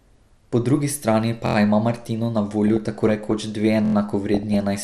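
Coarse bit allocation from MP2 compression is the likely cause of the dull, gurgling texture across the whole speech clip. Layer II divides the spectrum into 32 sub-bands and shares out a limited bit budget, so upper bands are dropped and the rest are quantised roughly. The result is muffled top end with a granular edge on the speech, plainly audible and consistent with a low rate around 80 kbps.

At 1.46 s the playback device ran short of fresh data and replayed its last buffer, a repeated buffer fault. The same slice of about 23 ms sounds five times in a row, with a hard join at each repeat, producing a brief stutter up to 1.56 s. The slice length fits a 1024-sample buffer, and the timeline resumes without any obvious gap in the sound.

From 2.68 to 3.44 s DAB burbling appears. Bit errors at a small fraction of a percent have slipped past error correction into the MP2 stream, corrupting samples in the audio data. 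It comes across as short blips of noise in single sub-bands laid over the speech.

A second repeated buffer stutter, identical in form, runs from 3.85 to 3.95 s. The same 23 ms piece plays five times with hard joins.

DAB burbling returns from 4.34 to 4.61 s, shorter but with a higher error rate, giving the same kind of sub-band blips over those frames.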